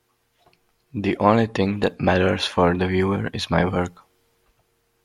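No technical faults turn up anywhere in this speech recording; nothing in it calls for a fix.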